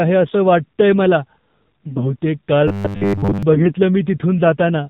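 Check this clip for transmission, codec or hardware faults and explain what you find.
The whole clip carries the AMR narrowband mobile codec at 7.4 kbps. Nothing above 4 kHz survives, and the low bitrate leaves the speech plainly buzzy and synthetic.

From 1.84 to 2.14 s, and again from 3.54 to 3.73 s, there are AMR bit errors. Flipped bits misplace the excitation pulses and skew the gains, so the voice turns hoarse and gargly. Pitch and level hold roughly.

From 2.68 to 3.43 s comes robotic sound from repeated short buffers. The audio repeats short blocks, most of the sound in that span, at a 100 Hz buzz. That fits 10 ms blocks, likely from starved buffers. The result is a rigid metallic drone.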